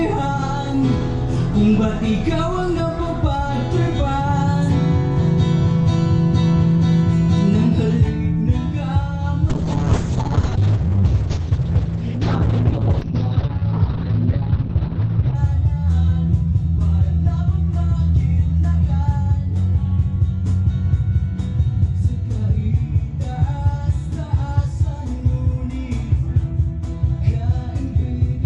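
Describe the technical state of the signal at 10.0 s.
A call bitrate drop is under way at 10.0 s; it runs from 9.51 s to 15.41 s. The link's bandwidth estimate collapsed and the encoder was forced onto a tiny bit budget, which the sound suggests fell from roughly 96 kbps to about 6 kbps. At that rate the audio bandwidth shrinks from 20 kHz to 6 kHz, so the sound turns muffled, coarse and watery until the rate recovers near 15.4 s.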